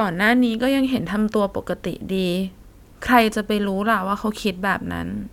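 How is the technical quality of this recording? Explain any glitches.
No glitches or technical faults can be heard here.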